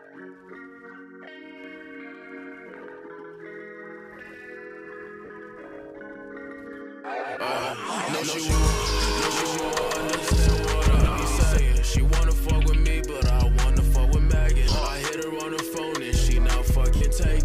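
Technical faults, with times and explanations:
1.64–11.58 s, doubled audio track: a second full-band copy of the audio is mixed in about 150 ms behind the first and at roughly the same level, likely from a second, slower capture path or an out-of-step edit. It has no decay or room colour and starts and stops abruptly.
5.25 s, 7.61 s, 10.94–11.16 s, 14.67–14.75 s, 16.96 s, lost LE Audio frames: Bluetooth LE Audio dropouts of 50, 20, 80 (scattered over 220 ms), 50 (scattered over 80 ms) and 50 ms, which fits 10 ms frames. The decoder refills each gap with the last spectrum under random signs, so tones smear into noise.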